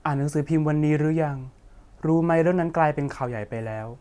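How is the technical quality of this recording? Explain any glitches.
The technical quality of this recording is sound, with no glitches to explain.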